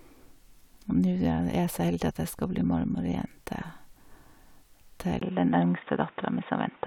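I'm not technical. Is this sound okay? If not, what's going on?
No. At about 5.19 seconds the speech suddenly turns dull and muffled, and it stays that way to the end. There is a tiny gap at that moment, shorter than a blink. After it, the brighter high sounds are gone. Nothing comes through above about 3.7 kHz. A faint new background hiss appears, but the loudness stays the same. This is most likely an input switched to a poorer device, such as a headset taking over from a better microphone.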